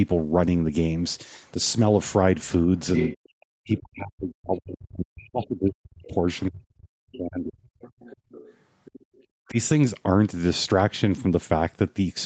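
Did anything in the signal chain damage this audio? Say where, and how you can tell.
Yes. At the call processing stage, the other side's voice leaks through at 2.95–3.17 s, 7.81–8.54 s and 8.85–9.24 s. A second voice sits behind the talker. It is about 10 dB below the speech at first, then about 25 dB below. The likely cause is an echo canceller leaving residual loudspeaker echo in the microphone signal.

Speech is suppressed in double talk at 3.19–6.2 s, 6.48–7.85 s and 9.49–9.57 s. The talker's level collapses by roughly 40 dB in the first two spans and about 20 dB in the brief last one. This is likely the canceller attenuating everything when both sides speak at once.

The background is gated by the echo canceller at 8.17–8.3 s. The room sound drops by about 23 dB for roughly 150 ms, during the leaked far-end audio. It returns when the suppressor releases.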